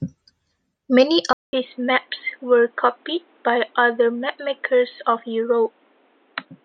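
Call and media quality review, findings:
Input switched to a poorer device at 1.33 s: 200 ms gap, then speech dull and boxy through to the end, nothing above 4.1 kHz, new background noise roughly 40 dB down, level about the same. Likely capture moved to a narrowband headset profile or secondary microphone.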